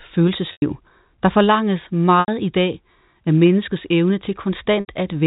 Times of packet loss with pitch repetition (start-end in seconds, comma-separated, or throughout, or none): 0.52-0.62, 2.20-2.28, 4.80-4.88